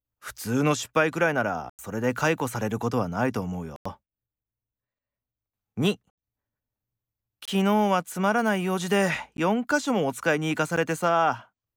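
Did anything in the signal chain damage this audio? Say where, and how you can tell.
Yes, there are blocks of digital silence in the speech, from the buffer stage. Hard dropouts hit at 1.70–1.79 s, 3.76–3.85 s, 6.10–6.18 s and 7.45–7.48 s, with clicks at 9.37 s and 10.76 s. Abrupt edges and 93 ms gaps fit unfilled 4096-sample output buffers.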